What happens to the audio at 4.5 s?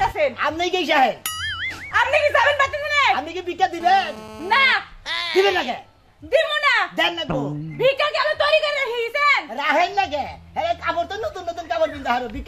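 A GSM phone buzz is running at 4.5 s. It lasts from 3.81 to 4.73 s. A nearby 2G phone in a call pulses its transmitter 217 times a second. The audio circuit rectifies those bursts. The result is a steady, raspy 217 Hz buzz, rich in harmonics, about 16 dB below the sound.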